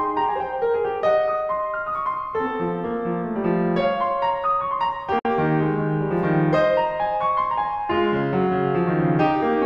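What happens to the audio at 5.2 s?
A gap at a join of encoded pieces opens at 5.19 s and lasts about 58 ms, to 5.25 s. Separately encoded segments, about 6 s long, were joined without trimming the encoder's start-up delay and final-frame padding, so the music drops to silence with smeared edges and then resumes where it stopped.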